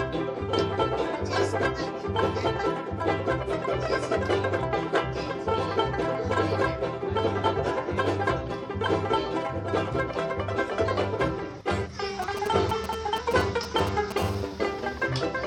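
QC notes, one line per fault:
12.22–14.12 s, GSM signalling bursts: galloping groups of ticks and short 217 Hz buzzes, only a few dB below the programme, from a nearby 2G handset's intermittent signalling pulses rectified by the audio circuitry.
14.18–15.06 s, GSM phone buzz: steady, raspy 217 Hz buzz rich in harmonics, about 16 dB below the signal, as the handset transmits continuously in a call and the audio path rectifies each burst.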